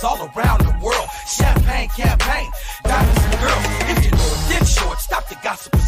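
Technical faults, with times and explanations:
Throughout, hard clipping: the sound is pushed about 5 dB past what a stage can pass, so around 3% of samples get flat-topped, adding high harmonics on the loudest moments.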